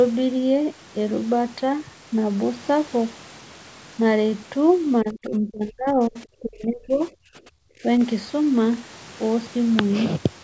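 From 5.02 to 6.17 s, 6.39 to 7.46 s and 7.62 to 7.86 s, the speech dips sharply and breaks up. It drops by about 25 to 35 dB. This is speech suppressed in double talk, likely from an echo canceller muting the talker during overlap.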